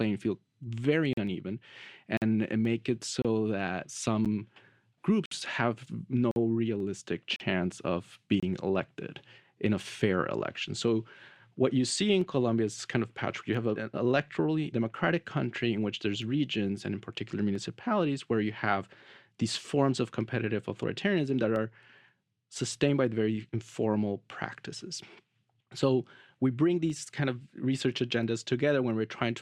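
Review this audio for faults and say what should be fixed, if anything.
Hard-edged silent holes of 10 to 56 ms interrupt the speech at 1.13, 2.17, 3.22, 4.25, 5.26, 6.31, 7.36 and 8.40 s. These are gaps between stream segments: timestamps on 1 s segments leave spaces that the player fills with silence. Fix this by aligning segment timestamps so each segment starts exactly where the previous one ends.

Regular clicks recur every 1.34 s from 1.27 to 28.23 s, about twenty in all. These are likely clock drift buffer slips, with a few samples dropped or repeated as the clocks diverge. Fix this by locking both devices to a common clock or adding adaptive resampling.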